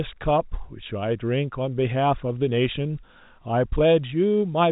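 No faults to report: the speech carries the expected G.711 telephone coding character, with nothing above about 3.8 kHz and only faint level-following quantisation noise.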